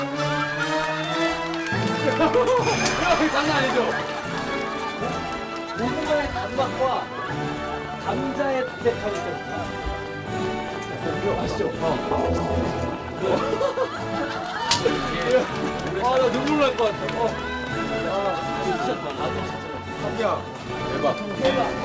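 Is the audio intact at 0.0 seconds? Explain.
Yes, the audio is intact at 0.0 seconds, with no fault at that moment beyond the ordinary band limit of the call path, which leaves nothing above 8 kHz.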